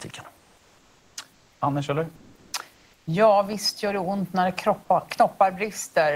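Comfort noise in place of the background appears at 0.37–1.17, 1.32–1.61, 2.15–2.53 and 2.73–3.07 s, likely from Opus discontinuous transmission. The pauses turn steady and featureless rather than falling silent as they would behind a gate, and the third sits about 5 dB louder than the room noise.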